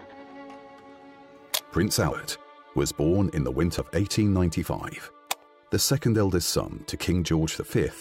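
Whole compressed frames were skipped, either missing from the file or rejected by the decoder as damaged. At 2.12 to 2.39 s the sound jumps ahead by roughly a tenth of a second, and at 3.60 to 3.79 s by roughly a fifth.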